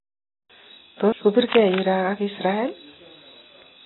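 From start to finish the speech sounds dull and smeared, with a fizzy, warbling edge on sibilants and nothing at all above 4 kHz. This is likely AAC compression, AAC-LC at a very low rate, something in the region of 16 kbps. With so few bits, the encoder drops the top of the spectrum, starves the remaining bands, and quantises them so coarsely that detail turns to swirling artefacts.

Between 1.52 and 1.81 s a dense, uneven scratching and rustling sits over the speech, roughly 10 dB below it. This is cable scratch noise, most likely from a worn cable, plug or control being disturbed. As the contact shifted, its resistance jumped erratically, injecting ragged bursts of noise into the signal for that third of a second.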